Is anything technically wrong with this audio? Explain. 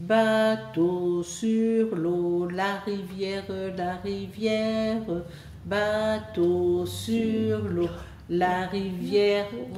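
No, nothing in the signal stands out as a technical fault.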